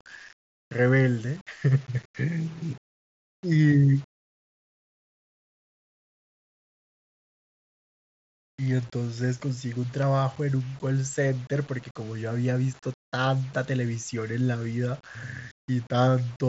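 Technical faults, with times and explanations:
Throughout, low bit depth without dither: grainy distortion rides on the speech about 30 dB down, likely from rounding to roughly 7 bits, so quiet tails turn gritty.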